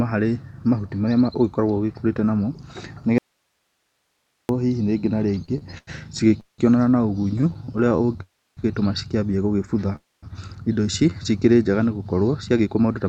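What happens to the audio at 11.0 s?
Around 11.0 s the speech briefly drags: from 10.91 to 11.23 s it runs at about 85% of normal speed, with sounds drawn out but the pitch unchanged. This is a jitter buffer slow-down. The receiving jitter buffer, running low or having just raised its target delay, repeated single pitch periods several times in a row, stretching this stretch by about 56 ms. The call codec limits the band to 8 kHz.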